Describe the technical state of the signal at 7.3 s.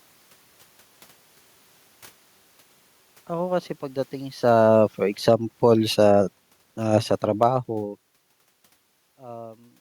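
Automatic gain falling from 6.8 to 7.57 s: the gain control pulls the level down about 4 dB, and the room noise sinks with the speech, unlike a talker simply moving away.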